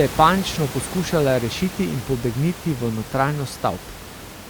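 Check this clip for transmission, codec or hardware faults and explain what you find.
No faults found; the only thing beneath the speech is the room's own background noise, sitting about 13 dB down, which belongs to the recording rather than the system.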